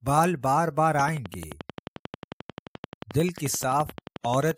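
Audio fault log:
0.99–4.52 s, train of clicks: some forty near-identical pulses arrive at a steady 11.4 per second, peaking roughly 10 dB above the audio. This is likely interference or a faulty connection or power supply. Unlike random crackle, the evenly spaced, same-shaped ticks persist through pauses.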